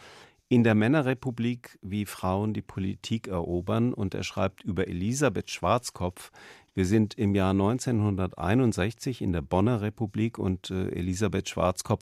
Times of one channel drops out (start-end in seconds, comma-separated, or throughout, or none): none